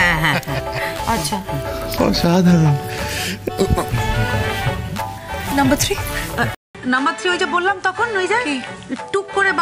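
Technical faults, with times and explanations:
6.55 to 9.62 s, input switched to a poorer device: after a 200 ms gap the sound goes duller, with nothing above 10.5 kHz. It drops about 5 dB and picks up a new noise floor roughly 30 dB down, likely from a changeover to a weaker microphone.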